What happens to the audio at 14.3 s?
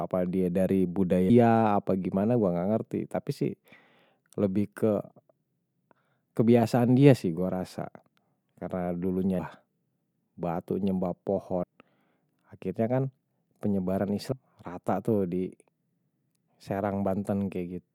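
At 14.32 s the speech jumps forward because compressed frames were skipped: several frames, about a fifth of a second of audio, never play, a jump that fits 32 ms codec frames. On a spectrogram, the harmonic patterns break abruptly.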